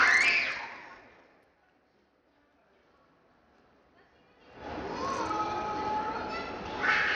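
From start to finish the treble keeps flickering and thinning out, with a gritty, grainy haze riding on top. That's likely Bluetooth SBC compression squeezed hard: the top sub-bands get starved of bits, and the damage is plain enough to suggest a low bit pool, somewhere around 80 kbps.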